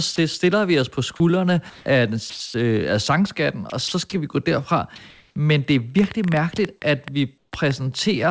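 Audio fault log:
0.16, 1.70–1.86, 2.30–2.40, 2.48–2.54, 3.70, 3.88–3.92 s: sound dropped by the voice detector. Speech briefly gives way to flat noise: once just before "stiller vi os på", twice between "på skuldrene af den" and "øh af sangskatten". Each gap lasts 20 to 100 ms, and at 1.70 s the fill runs 160 ms. The likely cause is the detector mistaking soft speech for background. Unlike a packet loss, the gap holds steady noise rather than silence or a smeared repeat.
5.10–5.36 s: comfort noise in place of the background. During this 260 ms pause the real room background, which sits about 49 dB below the loudest speech, is likely swapped for synthetic noise about 2 dB louder. It is featureless and steady, and no speech is cut, which sets it apart from the drops above.
7.38–7.52 s: comfort noise in place of the background. For 140 ms the pause again holds smooth, detail-free noise, about 1 dB quieter than the real background, which sits about 54 dB below the loudest speech. 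This points to the receiver filling a transmission pause.
5.99–7.72 s: train of clicks. About ten near-identical pops, averaging 6.4 per second but unevenly spaced, stand far above the sound and continue through the pauses. Their likely source is electrical interference or a struggling interface rather than the call codec, whose upper limit is 8 kHz.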